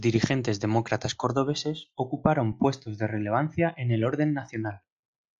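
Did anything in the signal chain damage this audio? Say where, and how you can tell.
Yes. From about 1.22 s to the end of the clip, the speech turns dull and muffled, which points to de-emphasis applied wrongly at the decode or playback stage. A treble-cut filter meant to reverse pre-emphasis was run on audio that never had it, or was run a second time, so the high end falls away smoothly, to about 8 dB down at 10 kHz relative to 1 kHz. On a spectrogram, the upper bands darken from 1.22 s onward as a gentle slope.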